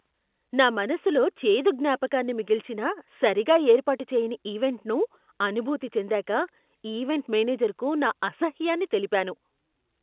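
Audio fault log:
No fault to log.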